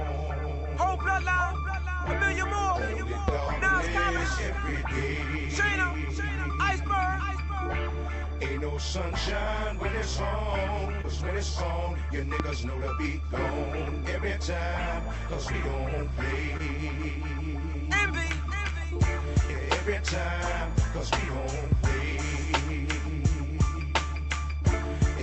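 At 1.33–1.37 s, 11.01–11.05 s and 16.57–16.61 s there is short concealed packet loss. About 20 ms of audio went missing each time and was patched by extending the preceding sound, so each gap comes across as a brief smear or wobble rather than an added click.

At 3.28–3.31 s and 12.40–12.43 s a single loud pop sits about 15 dB above the signal, likely from a voltage step such as a plug, switch or static discharge. Unlike the concealment, it lands on top while the sound carries on underneath.

All of this rides on a call path whose Opus coding and roughly 8 kHz band limit fit a 40 kbps WebRTC setting.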